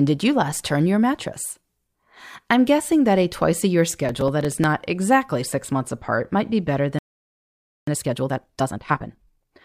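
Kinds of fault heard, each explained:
Processor overload crackle: From 4.09 to 4.64 s, about ten very short buffers miss their deadline and replay old audio, producing gritty crackle over the speech.
Playback stall: At 6.99 s the output goes silent for 888 ms, likely because the player ran out of data or its thread was blocked.
Time-compressed catch-up: From 7.87 to 9.53 s the speech runs at 1.5 times normal speed, pitch unchanged, as small cross-faded cuts clear the backlog.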